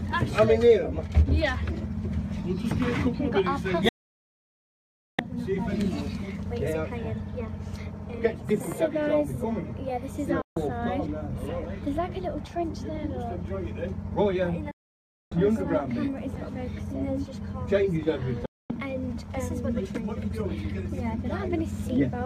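Four digital broadcast dropouts break up this 22-second piece of audio: 3.89 to 5.19 s, 10.42 to 10.57 s, 14.71 to 15.32 s, and 18.46 to 18.70 s. Each time the sound fades out in about 3 ms, sits silent, then picks up further along. That's the receiver muting while frames fail to decode. The gaps, from about 0.15 s to 1.3 s, all fit whole frames of roughly 24 ms, and whatever aired in them is gone.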